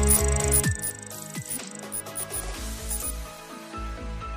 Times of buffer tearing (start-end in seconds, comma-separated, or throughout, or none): none